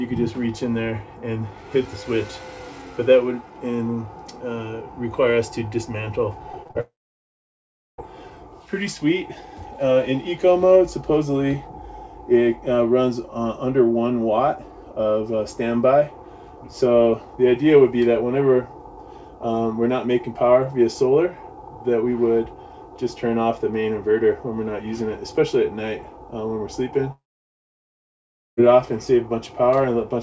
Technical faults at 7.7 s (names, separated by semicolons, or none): long network dropout